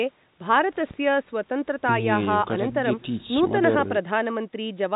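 No technical faults can be heard anywhere in this speech recording. Having gone through a G.711 mu-law call path at 64 kbps, it has nothing above 4 kHz, which gives it the narrow band of an ordinary phone line.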